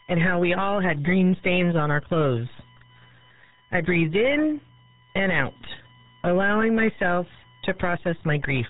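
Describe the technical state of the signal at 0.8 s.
At 0.8 s the speech carries two faults. Both run through the whole clip, so this moment is typical of the rest.

The first is USB whine. A fixed-pitch tone sits under the speech, built on 1 kHz with its harmonics. It is strongest around 13 kHz. It is roughly 25 dB below the speech. The bus draws current in regular 1 ms frames. That ripple leaks into the audio through shared power or ground. The result is a steady, thin whine that never changes pitch.

The second is RealAudio 14.4 codec damage, and it is heavy. Nothing above about 3.9 kHz survives. The speech sounds muffled and gargly. Consonants lose their edge. This is a speech codec built for dial-up modems. It discards most of the signal to fit a tiny data rate. The sound points to roughly 8 kbit/s.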